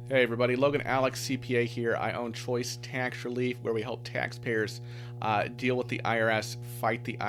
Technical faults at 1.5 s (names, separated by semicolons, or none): mains hum